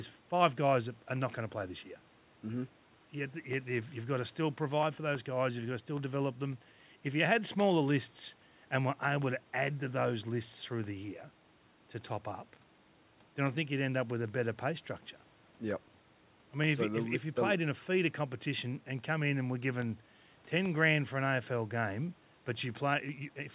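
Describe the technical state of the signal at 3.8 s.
At 3.8 s the speech is intact, with no dropout, glitch or distortion, only the narrowband call sound of a path that carries nothing above 4 kHz.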